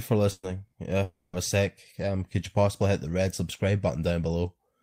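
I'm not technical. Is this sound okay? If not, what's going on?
No. At 0.31 s and 0.67 s there is a burst of packet loss. Short pieces of speech vanish. A brief held buzz or hiss covers each gap. From 1.03 to 1.36 s, about 0.3 s of speech is replaced by a fading buzz or hiss. This is likely a long network dropout. The speech then jumps ahead.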